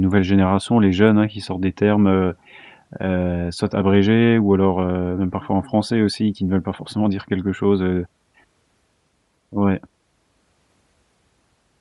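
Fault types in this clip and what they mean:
Bluetooth LC3 compression: a plainly audible breathy, grainy edge sits on the speech throughout, with upper frequencies sounding noise-filled rather than detailed. The cause is likely LC3, the Bluetooth LE Audio transform codec, at a rate fitting a 48 kbps stream with 10 ms frames.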